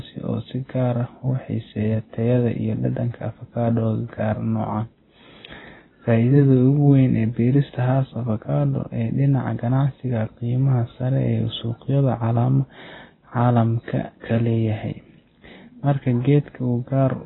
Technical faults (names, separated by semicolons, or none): AAC compression